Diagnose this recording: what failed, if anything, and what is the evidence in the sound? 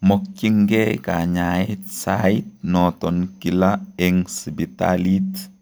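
Nothing failed; no stage of this speech shows faults.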